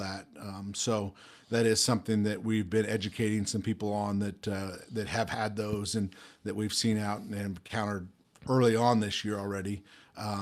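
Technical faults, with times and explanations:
7.67 to 7.71 s, short stall from a late packet: the sound briefly hangs with a slight buzz or dip, then resumes with nothing lost. A packet arrived late and the jitter buffer emptied, so 20 ms of the last sound was stretched, leaving playback 20 ms later afterwards.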